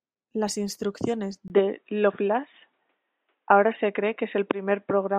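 At 1.48 s the speech drops out for about 20 ms. It then returns dull and boxy, with nothing above 3.8 kHz. The level shifts by around 5 dB, and a faint new noise floor appears. This is likely an input switched to a poorer device.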